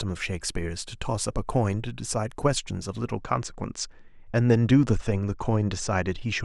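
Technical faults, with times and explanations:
3.13 to 6.44 s, channel delay (comb filtering): one channel lags the other by roughly two samples, a few hundredths of a millisecond, so summing to mono cancels a notch around 10 kHz and the speech goes dull up top.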